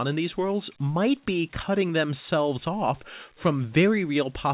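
No faults found in the speech; the band stops at 4 kHz, consistent with a call path using G.711 A-law, with nothing else to report.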